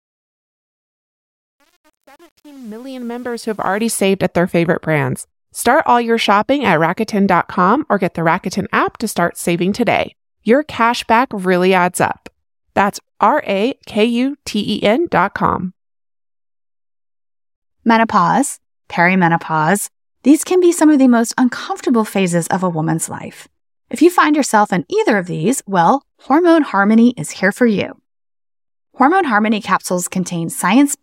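Truncation distortion on a fade runs from 0.0 to 3.83 s at the start of this speech clip, harshest from 0.0 to 3.42 s. The fade-in reaches full level by 3.83 s, but the gain stage behind it drops low-order bits without dither, and the grain suggests only about 8 bits survive. At the quietest part of the ramp the waveform collapses into coarse square steps, so the sound turns gritty before the level rises clear of it.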